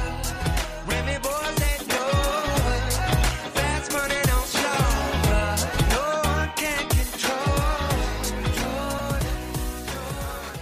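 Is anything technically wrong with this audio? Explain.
Yes. Between 8.98 and 9.01 s the stream likely suffered a broken MP3 bit reservoir. Frames appear to have been dropped, so the frame after the gap reached back into earlier bytes for its borrowed data and decoded material belonging to a different frame. The audio skips forward, and for about 30 ms, roughly one 26.1 ms frame, the decoded output turns into a chirp, a burst of noise or a short hole instead of continuous sound.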